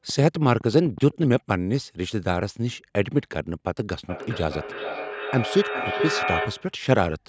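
A speech clip with two faults. From 0.09 to 1.37 s a train of clicks ticks over the sound at a steady 7.9 per second, around ten pops reaching roughly the level of the speech itself, likely from electrical interference or a faulty connection or power supply. From 4.09 to 6.82 s the speech comes back at about 0.4 s intervals, peaking about 6 dB below the direct sound. This feedback echo between two devices arises when a second device in the room plays the call and this microphone picks it up again, outside the reach of its own echo canceller. The call microphone processing is audible only in the band ending at 8 kHz.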